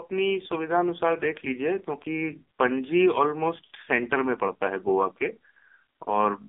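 From start to finish the speech runs through an AMR narrowband mobile codec. The sound sits between 250 Hz and 3.6 kHz, with nothing above 3.8 kHz, and it is heavily buzzy and synthetic, which fits a 5.9 kbps mode. A spectrogram shows a flat ceiling and smeared harmonics.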